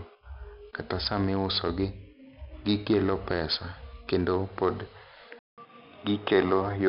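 From the start, the speech carries heavy 4-bit ADPCM compression. Each sample is coded as a coarse 4-bit step from a predicted value, and the adaptive step size lags behind sudden changes, so a gritty hiss rides on every loud syllable and consonant onsets sound rough. The spectrum has nothing above 5.3 kHz, which dulls the speech and fits a data rate of around 44 kbps. On a spectrogram, the grainy noise fills the band up to that hard ceiling and brightens and fades with the speech.

At 5.39 s the sound drops out for about 0.19 s and then returns noticeably duller and boxier through to the end of the clip. The likely cause is an input switched to a poorer device, such as a different microphone or a headset's call profile. The loudness stays about the same, but the band now stops at 3.8 kHz and a new background noise sits roughly 30 dB under the speech. On the waveform the gap is a flat stretch. 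On the spectrogram, the top of the band steps down from 5.3 kHz to 3.8 kHz, and a faint noise layer appears between the words.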